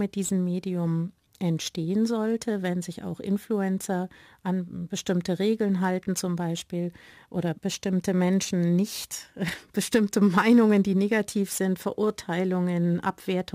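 Throughout the speech, crude rate conversion from 48 kHz to 44.1 kHz picks the nearest sample rather than filtering, leaving error roughly 30 dB below the signal. It sounds like gritty, inharmonic fizz riding on loud and sibilant passages; a spectrogram shows faint mirrored tonal streaks unrelated to the voice's harmonics.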